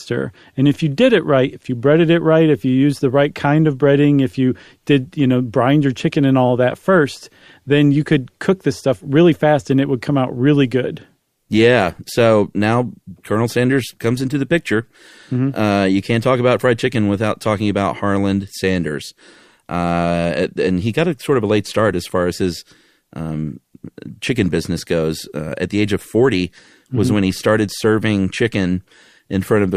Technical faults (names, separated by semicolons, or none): none